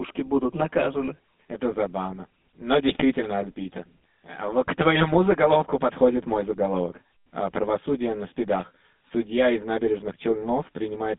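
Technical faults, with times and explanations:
Throughout, channel delay (comb filtering): one side of the stereo pair arrives roughly 10 ms behind the other, and when the two are folded to mono the shared content cancels at evenly spaced frequencies, starting somewhere around 40 Hz and repeating up the spectrum. That row of fixed notches gives the speech a hollow, slightly phasey colour that stays put the whole time, because the offset never changes.
Throughout, GSM full-rate codec: the speech has gone through the original GSM full-rate coder, and you can hear it plainly. The line band runs from 200 Hz to 3.6 kHz, so the low end is thin and everything above goes missing. The coder rebuilds speech from a vocal-tract model driven by a sparse pulse train, and that coarse excitation is what gives the buzzy, gravelly roughness sitting on top of every phrase.
2.88 to 3.03 s, GSM bit errors: for about 150 ms the decoder is fed corrupted data, which fits a small run of consecutive frames being hit on a weak link. 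When the filter, pitch and gain parameters arrive scrambled, the rebuilt spectrum gets bent out of shape and the level jumps from frame to frame. So the speech briefly collapses into a gargling, squawky burst before the clean coded sound returns.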